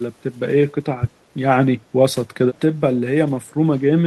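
From 0.82 to 1.01 s the speech dips in places, about 20 dB at its deepest and around a tenth of a second in total. This is speech suppressed in double talk, likely an echo canceller that mistook the talker for loudspeaker echo while both sides spoke and turned both down. The waveform envelope shrinks there, and the spectrogram's energy fades.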